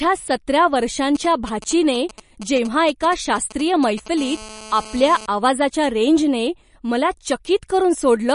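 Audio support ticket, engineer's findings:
MP3 compression, whole clip (speech). Watery, swirly texture with smeared attacks; nothing above 10.6 kHz. Likely a low-bitrate MP3 stage, damage plainly audible, which fits roughly 45 kbps; starved encoder zeroing weak frequency lines frame to frame, treble cut fixed.

GSM signalling bursts, 1.15 to 4.08 s. Galloping dit-dit-dit of short 217 Hz buzzes, roughly 15 dB below the speech. Nearby 2G handset signalling with grouped radio bursts; audio circuit rectifying the RF, the envelope demodulated into the audio path. Check cable routing and RF filtering.

GSM phone buzz, 4.18 to 5.26 s. Hard, raspy, steady 217 Hz buzz rich in harmonics, about 18 dB below the speech, unrelated to the speech. Nearby 2G handset in a call, transmitting 217 bursts a second; rectified pulses demodulated into the audio path. Relocate the phone.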